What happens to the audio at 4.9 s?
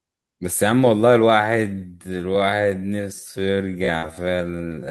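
At 4.9 s the speech is still inside a time-stretched section running from 1.28 s to the end, likely slowed to 0.54 speed by repeating short pieces, so it drags at unchanged pitch.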